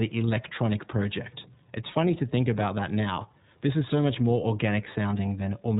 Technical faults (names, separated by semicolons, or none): iLBC codec